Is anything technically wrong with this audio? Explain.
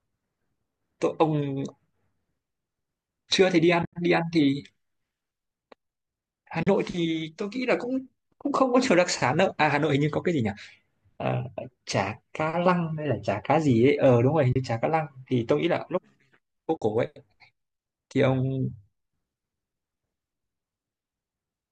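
Yes. There is AAC frame loss with muting at 3.83 to 3.95 s, 6.63 to 6.67 s, 14.53 to 14.56 s and 16.77 to 16.82 s. The decoder zeroes the missing frames, and overlapping windows fade the speech out and back in. The first hole totals 100 ms, in gaps of up to about 70 ms. The others last 40, 30 and 50 ms. They are soft-edged dropouts. The short frames likely come from low-delay AAC, which adds only a slight roughness here.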